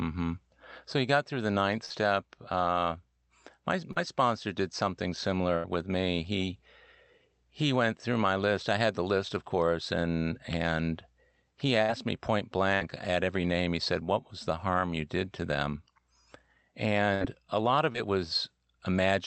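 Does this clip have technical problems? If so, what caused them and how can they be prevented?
Yes. Bursts of packet loss at 1.85–1.92, 5.56–5.66, 11.82–11.90, 12.74–12.82 and 17.14–17.23 s dropped 40 to 80 ms each. The receiver stretched and faded the last sound into a held buzz or hiss, then jumped ahead. A larger jitter buffer, forward error correction and a steadier network path would prevent this.

Short concealed packet losses at 3.92–3.98 and 17.93–17.96 s left 20 to 40 ms gaps that were filled by extrapolation, heard as brief smears or wobbles. Enabling Opus in-band FEC and reducing congestion on the link would prevent them.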